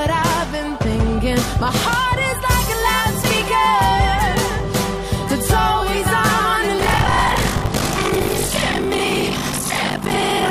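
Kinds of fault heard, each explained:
Buffer tearing: writer and playback hardware have slipped, so each buffer mixes new audio with roughly 70 ms older audio, giving a 50 Hz rattle.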